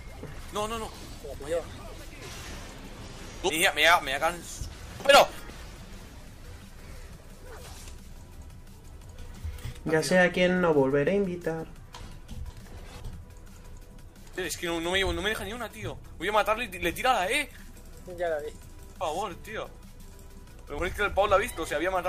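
Chunks out of order occur at 3.5 to 5.5 s, 12.0 to 13.0 s and 19.0 to 20.5 s. In each span, a half-second block of audio plays late, after material that should follow it. The displacement spans roughly three blocks in the first span, one in the second and two in the third. Nothing is missing, but the sequence jumps backward and forward at three hard joins per span, giving a brief jumbled stutter.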